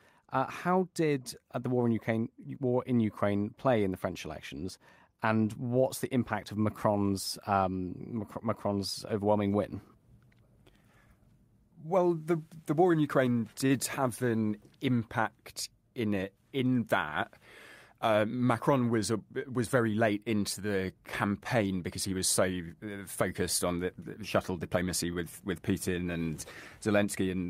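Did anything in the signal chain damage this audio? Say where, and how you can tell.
Yes, at the network stage: a short stall from a late packet at 13.66 to 13.72 s. The speech hangs on one sound for about 37 ms with a faint buzz or dip, then carries on where it left off. The jitter buffer ran dry, so the receiver stretched the last bit until the packet showed up. Nothing's actually lost, but everything after sits 37 ms later.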